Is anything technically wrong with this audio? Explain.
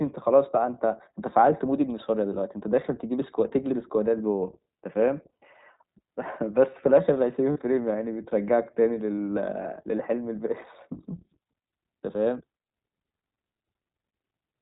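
Yes, the speech shows two related faults.

Throughout, the iLBC codec is audible: everything above 4 kHz is gone, and the voice has a rough, slightly synthetic grain. This fits iLBC's 15.2 kbps, 20 ms-frame mode coding each frame's excitation independently. A spectrogram shows a hard ceiling at 4 kHz.

Lost iLBC frames occur at 5.41 to 5.44 s, 7.52 to 7.58 s, and at 9.17 s. The decoder fills each gap by repeating the last pitch cycle mixed with noise, giving a brief held, buzzy vowel. The missing audio amounts to about 100 ms, 40 ms and 20 ms, which fits five, two and one lost frames. The voice recovers almost immediately each time. On a waveform these spots appear as near-identical repeating periods that decay slightly. On a spectrogram they show as smeared, steady harmonic bands.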